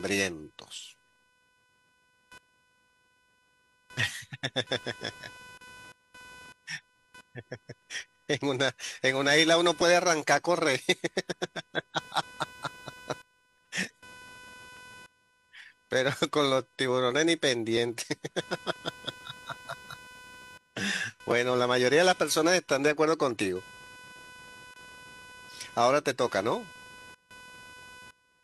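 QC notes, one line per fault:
Throughout: computer activity noise. Processor or graphics load is disturbing the audio circuit's shared ground, adding a buzzy, chirping tone pulsing at roughly 500 Hz, about 25 dB below the speech. It rises and falls with machine activity, not with the talking.
4.83–4.87, 6.82–6.85, 7.82–7.86, 9.81–9.86, 14.77–14.80, 17.77–17.80, 18.73–18.76 s: overlap between stream segments. Timestamps of adjacent 1 s segments overlap, so the player discards 30–42 ms of real speech at each boundary. The waveform jumps, giving small clicks or skips on the segment grid.
13.65, 21.31 s: repeated buffer. Fresh audio arrived late, so the device replayed its last block, which fits a 256-sample buffer of 5.8 ms, several times in a row. The hard joins make a brief buzz or click, and no audio is lost.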